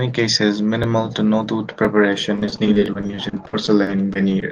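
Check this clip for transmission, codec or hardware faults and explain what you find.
Two faults are present: overlapping chunks that repeat a sliver of audio once a second, and a run of repeated packet loss that makes the last two seconds choppy and robotic. The speech came through a call path whose codec band stops around 12 kHz.

Overlapping chunks occur at 0.84 s (just before "to no tooth"), 1.85 s (just after "to no tooth"), 2.86 s and 3.87 s. The audio was handled in 1.0 s chunks, and each new chunk began 12 ms before the previous one ended, so that 12 ms plays twice at every join. The duplicated sliver breaks the waveform's continuity and is heard as a brief click or stutter recurring at a steady one-second spacing.

Repeated packet loss (robotic sound) runs from 2.36 s to 4.49 s. Audio packets kept going missing or arriving too late, leaving 22 short holes, none longer than 40 ms. 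The receiver patched each one by stretching the sound that came before it. About 480 ms, roughly a quarter of the stretch, was filled this way, and about 420 ms of real audio was lost. The result is choppy speech with pieces missing.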